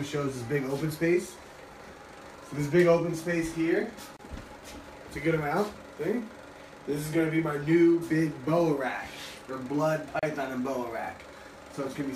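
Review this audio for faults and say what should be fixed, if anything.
A gap at a join of encoded pieces appears at 4.17–4.19 s and 10.19–10.23 s, every 6 s. Encoder delay and end padding left about 27 ms and 34 ms of silence. Trim encoder delay and padding before joining.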